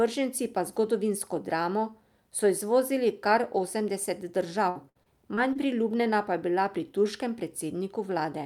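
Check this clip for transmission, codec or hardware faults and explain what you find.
One transmission fault stands out: repeated packet loss (robotic sound) between 4.69 and 5.57 s. Across that span the stream dropped or delayed packets five times, and the receiver covered each hole by stretching the last audio it had, about 176 ms in total, roughly a fifth of the stretch, with the longest gap near 60 ms. Because the patches come in quick succession, the speech turns choppy, with small pieces missing.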